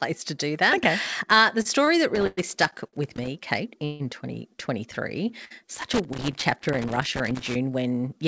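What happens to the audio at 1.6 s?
A packet arrived late at 1.62 s, the jitter buffer ran dry, and the receiver produced a short stall from a late packet, stretching the last bit of speech for about 29 ms until the data showed up at 1.67 s. Playback then resumed from the same point, so no speech is lost, but everything afterward sits about 29 ms later. You hear one sound held slightly too long, with a faint buzz or dip in level.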